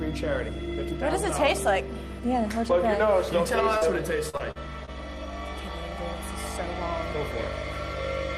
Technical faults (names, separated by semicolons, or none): short concealed packet loss; repeated packet loss (robotic sound)